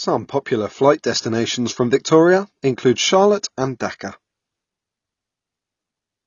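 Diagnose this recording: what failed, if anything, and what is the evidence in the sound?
The codec stage failed: the speech was likely squeezed through AAC compression at a starved bitrate, which fits AAC-LC at about 24 kbps. Throughout the clip nothing survives above 7 kHz, so the speech sounds dull and muffled, and the coding damage is plainly audible.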